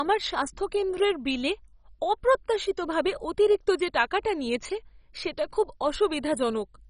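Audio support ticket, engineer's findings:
MP2 compression, throughout. Speech dull, nothing above 10.4 kHz; gurgling, granular distortion from heavy damage. Likely MPEG Layer II encode at a very low rate, consistent with around 32 kbps: upper sub-bands dropped, remaining bands coarsely quantised and flickering.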